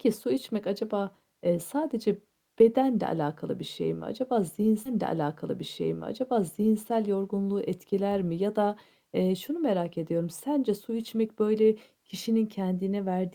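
At 4.85 s a stream segment is repeated: two seconds of speech replay after a small blip, a whole chunk re-queued rather than a short stuttering buffer loop.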